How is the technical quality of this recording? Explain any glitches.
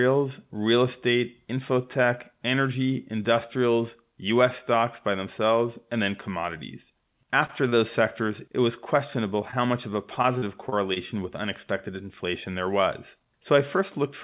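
The speech is band-limited, with nothing above 4 kHz, which fits a narrowband G.711 A-law call path. It has four network glitches: two brief stalls, one concealed dropout and a short robotic stretch.

Short stall from a late packet, 7.46–7.51 s and 7.69–7.76 s: The first comes right after "themselves and then commodities", and the second comes just before "sectors it was questionable". Each time a packet arrived late, and the jitter buffer ran dry. The receiver held the last sound for about 25 ms and then resumed with little or nothing missing. On a spectrogram the harmonics run flat and frozen for a moment. The waveform shows a repeated cycle with a slight amplitude dip, heard as a tiny buzzy hold.

Short concealed packet loss, 9.51–9.54 s: About 20 ms of audio never reached the decoder. The receiver patched most of the hole by extrapolating the preceding sound and then cross-faded back. 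This gives a quick smear or wobble. The spectrogram shows a smoothed, slightly blurred sliver where fine detail vanishes, and the waveform shows a brief unnaturally regular patch.

Repeated packet loss (robotic sound), 10.15–10.98 s: This runs between "much of a" and "with unexpected inflation there". Six separate gaps occur, the longest 35 ms, and they total about 120 ms. Each gap is filled by continuing the last sound, so the stretch turns choppy with pieces missing. On a spectrogram it looks like a stuttering series of smeared, repeated harmonic blocks. The waveform shows a run of periodic patches breaking the natural envelope.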